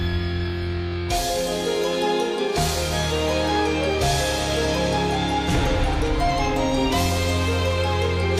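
Nothing is technically wrong with this clip.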